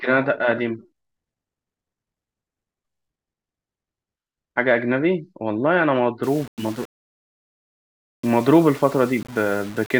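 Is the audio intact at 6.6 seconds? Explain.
No. From 6.23 s to the end of the clip at 9.99 s, the speech carries a grainy, signal-following distortion, so 6.6 s falls inside the damaged span. This is low bit depth without dither: the likely cause is rounding to very few amplitude steps, which fits roughly 6-bit resolution. The error sits only about 25 dB below the signal, so quiet passages turn gritty and the softest decays sputter or drop out.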